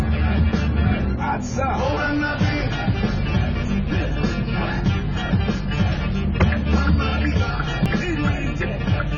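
A recording of everyday sounds, dull and smeared throughout, with a warbling, fizzy texture and nothing above 7 kHz. This is likely AAC compression at heavy settings, consistent with a bitrate near 16 kbps. On a spectrogram, the energy stops flat at 7 kHz, with patchy holes below. There are also two abrupt skips, at 3.91 s and 7.86 s, four seconds apart. Each is a jump where roughly 50 ms has gone, and the likely cause is audio missing between chunks in a 4-second recording cycle. On the waveform, each skip shows as a sudden discontinuity with no gap of silence. On the spectrogram, each appears as a thin vertical seam where the texture changes at once.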